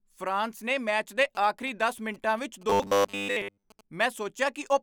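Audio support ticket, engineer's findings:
Galloping dit-dit ticks with short buzzes, 0.88–3.81 s, about 25 dB below speech. GSM signalling bursts: nearby 2G phone's 217 Hz radio bursts rectified by the audio input circuitry.

Rigid metallic 100 Hz buzz on speech, 2.70–3.64 s. Likely robotic sound from repeated short buffers: about 10 ms chunks replayed in place of most of the audio.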